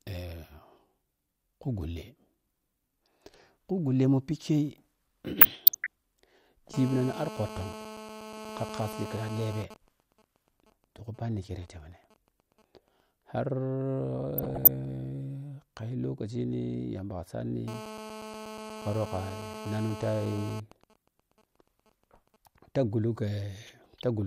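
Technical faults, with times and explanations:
5.38–5.87 s, 14.38–14.67 s and 23.67–24.05 s: DAB burbling. Each patch lasts about half a second or less and burbles over the speech. Weak reception is letting bit errors slip past the error correction into the MP2 data, at an error rate well under one percent. Bad samples put short blips of noise into single sub-bands, and bad scale factors make sub-bands jump in level for up to a frame. The first patch is the densest, and it sounds like a couple of dozen frames took hits.
6.74–9.63 s and 17.68–20.60 s: GSM phone buzz. This is a hard, raspy 217 Hz buzz loaded with harmonics, sitting about 9 dB and about 10 dB below the speech and holding steady for roughly three seconds each time. A 2G phone on a call nearby is transmitting in bursts 217 times a second, and the audio circuitry is rectifying those RF pulses. That's why the buzz has nothing to do with the programme underneath it.
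9.64–13.01 s and 20.72–22.36 s: GSM signalling bursts. Each one follows straight on from a steady buzz and turns into even ticks with a longer 217 Hz buzz twice a second, much quieter, around 20 to 25 dB down. The phone is still on the call, but its user has gone silent, so it only sends occasional groups of bursts instead of a continuous stream. The audio stage rectifies each group into that stuttering pattern.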